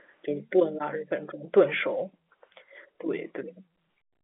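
No faults are present in the speech; the narrow band, about 200 Hz to 3.5 kHz with nothing above roughly 3.7 kHz, is the expected sound of G.711 telephone coding in its A-law form.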